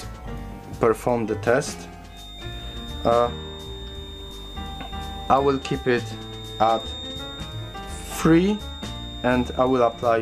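From 2.04 s to the end of the clip, a feedback whistle sits behind the sound: a thin, steady tone at 3.7 kHz, about 15 dB below the main signal and swelling and fading slowly in level. The likely cause is a loudspeaker-to-microphone loop held just at the edge of feedback, where gain at that one frequency is high enough to sustain a ringing tone but not enough for it to build into a runaway howl.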